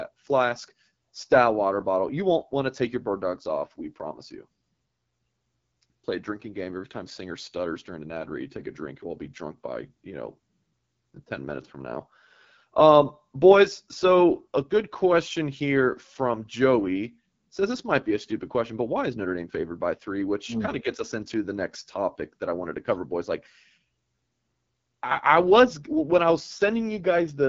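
AMR wideband (HD Voice) codec damage runs throughout: the roughness and rasp in the speech fit its 8.85 kbit/s rate, and nothing sounds above 7.6 kHz.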